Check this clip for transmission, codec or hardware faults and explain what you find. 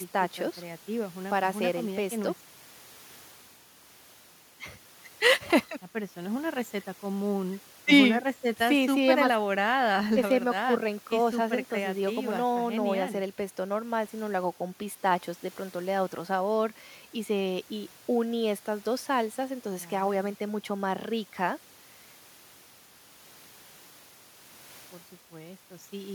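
Nothing in the speech signal points to a technical problem at any point, and the audio holds together with no audible defect.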